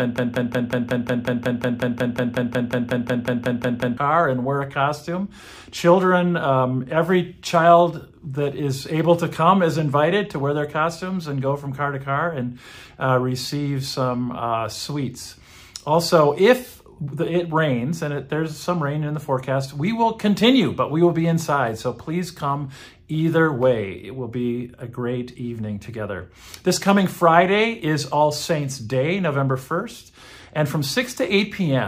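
A stall in the player, encoder or stream likely froze playback on its last held fragment: from the start to 3.97 s, a broken-record loop repeats one 0.18 s piece exactly, back to back, 21 times, already under way when the clip begins, and the audio meant for that stretch is lost.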